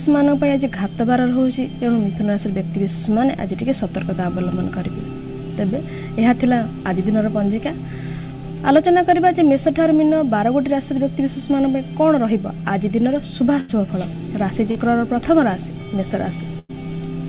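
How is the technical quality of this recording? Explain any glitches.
The recording has three network dropouts within about three seconds near the end, all heard through a call path that leaves nothing above 4 kHz, which fits a narrowband telephone codec such as G.711.

A burst of packet loss occurs at 13.60 to 13.73 s and again at 16.59 to 16.71 s. In each, roughly 80 to 100 ms of audio arrived too late or not at all. The receiver stretched the last sound it had and faded it, giving a held buzz or dying hiss. The audio then picks up further along, with that stretch missing.

A short concealed packet loss occurs at 14.71 to 14.77 s. About 40 ms failed to reach the decoder. The receiver patched the hole by extrapolating the preceding sound, then crossfaded back into real audio. The result is a brief smear or wobble rather than a clear gap.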